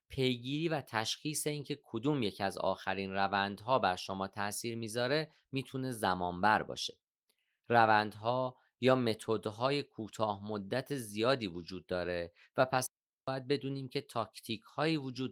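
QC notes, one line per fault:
12.86–13.28 s digital wireless dropout: a clean 0.41 s hole of near silence in the speech, no noise burst either side, as the receiver mutes on lost data.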